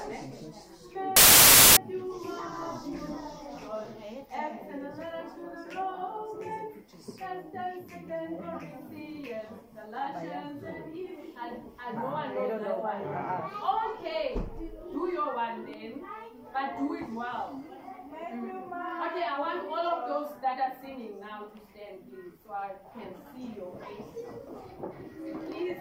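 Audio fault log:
1.16–1.77 s, file tags played as audio: an embedded cover picture, stored as compressed data, is decoded as though it were samples, so its near-random bytes come out as a hard-edged burst of very loud white noise lasting about 0.6 s.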